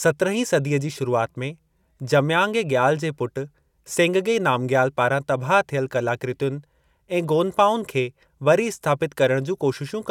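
Nothing in this recording stood out as a technical fault on listening.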